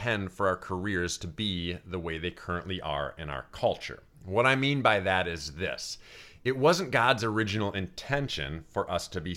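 Sample clock jitter runs from 5.28 to 9.00 s, right after "I mean by that". The converter's clock wanders by around a microsecond, so each sample lands slightly off time, adding a hiss about 40 dB below the speech that roughens louder, brighter sounds and drops away in pauses.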